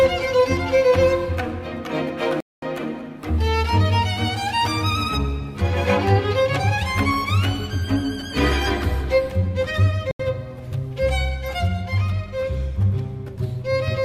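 At 2.40 to 2.64 s and again at 10.11 to 10.20 s, stream reconnects break the audio with silences of 218 ms and 82 ms. Unlike a plain dropout, playback resumes further along, about 0.2 s later and then under a tenth of a second later, because a fresh decoder joined the live stream.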